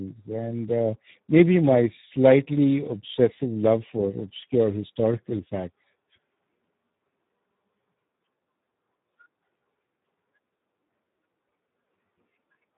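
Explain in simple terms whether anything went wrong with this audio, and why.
The speech sounds rough and hoarse from start to finish, and it is muffled because nothing above about 3.8 kHz comes through. That is heavy Speex codec damage. Speex is an older voice-chat codec that squeezes speech into very little data by rebuilding the voice from a rough model. At a setting this low, too little detail survives, so the rebuilt speech comes out grainy and dull.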